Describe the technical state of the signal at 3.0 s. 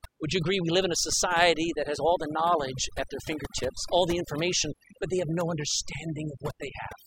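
At 3.0 s you're hearing overdone noise removal, and it runs the whole clip. The denoiser was set too hard, so it's killing individual frequency bands near its noise estimate, taking quiet bits of the speech too. The background drops and breaks up into twinkly specks.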